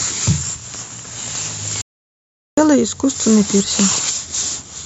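The input signal was likely lost briefly, from a dropped link or device, while recording continued, producing an audio dropout to silence in this speech clip from 1.81 to 2.58 s. For about 0.76 s the sound cuts to silence with no room tone, and whatever was spoken there is gone.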